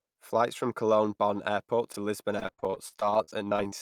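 At 1.92 s the speech briefly jumbles until about 1.96 s. These are chunks out of order: one piece of roughly 21 ms arrived a chunk late and plays after the piece that should follow it, which fits 21.33 ms audio blocks. Nothing is missing; the material is only swapped, leaving three hard joins. A dropout would leave a hole or smeared patch, but this is a quick, complete stutter.

From 2.39 s to 3.74 s the speech turns choppy: repeated packet loss (robotic sound). Around nineteen separate holes open across this stretch. Each is patched by stretching the preceding sound, about 397 ms of filler in total, while about 320 ms of real audio is gone, so roughly 30% of the span is concealed. The longest hole is about 56 ms. Unlike a single reordering glitch, the damage recurs steadily, producing choppy sound with pieces audibly missing.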